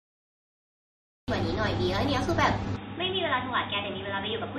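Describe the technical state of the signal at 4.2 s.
At 4.2 s you're inside a stretch, from 2.76 s to the end, where the input likely switched to a poorer device. Everything above 3.8 kHz is gone, so the speech sounds dull and boxy, a bit quieter, with faint new background hiss. The change is abrupt, with no gap at the switch.

On top of that, MP3 compression runs through the whole clip and is plainly audible here. The treble was already cut at 13 kHz, and the watery, swirly texture from weak frequency lines flickering on and off points to a low bitrate of around 37 kbps.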